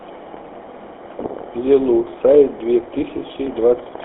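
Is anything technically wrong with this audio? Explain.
Yes. Throughout, the speech has passed through the GSM full-rate codec, at a rate that fits its 13 kbps mode. It models the vocal tract and excites it with sparse regular pulses, confining the line to 250 Hz to 3.5 kHz. The result is a narrow, plainly buzzy, gravelly voice.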